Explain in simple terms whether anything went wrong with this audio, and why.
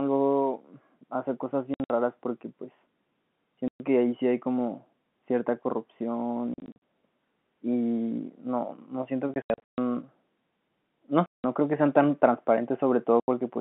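Packet loss filled with silence at 1.74–1.9, 3.68–3.8, 6.54–6.78, 9.34–9.78, 11.26–11.44 and 13.2–13.28 s: chunks of the speech went missing in transit and were replaced by silent gaps in steps that fit 20 ms packets.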